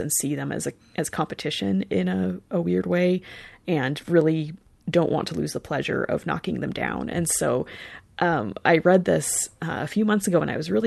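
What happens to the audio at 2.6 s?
Nothing goes wrong at 2.6 s: the audio carries straight through that moment with no dropout, glitch or break.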